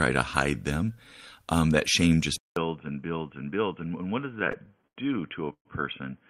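At 2.36 s the sound goes silent for about 200 ms and then returns duller and boxier, with a level about 5 dB lower and a faint new background noise roughly 40 dB below the signal. This lasts to the end. The likely cause is an input switched to a poorer device mid-recording. A bandwidth-only drop would not change the tone, level and noise floor together at one switch point.

From 4.21 s to 4.98 s there are repeated stalls (stutter). Late packets left the jitter buffer empty ten times, and the receiver stretched the last sound across each gap. The fill totals 183 ms, the longest single gap is 85 ms, and about a quarter of that stretch is concealed. Nothing is actually missing, so the audio drags and hiccups rather than losing pieces. That sets it apart from packet loss, where fragments vanish.

From 5.53 s to 5.67 s comes a single call audio freeze, likely from packets held up in transit. 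The last sound is held as a fading buzz or hiss, then about 90 ms of silence follows, 121 ms in all, before the audio resumes exactly where it stopped. This is one longer hold that lands mostly in silence and pushes everything after it later. The stutter, by contrast, is a rapid series of short stretches.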